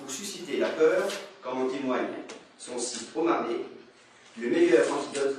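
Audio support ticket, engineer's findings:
Adaptive stream at a lower bitrate from 1.29 s to end. Sudden quality drop, no gap. Treble gone above 9.7 kHz, codec artefacts up. Points to a switch down to a low-bitrate AAC rendition, roughly 32 kbit/s, after the connection slowed.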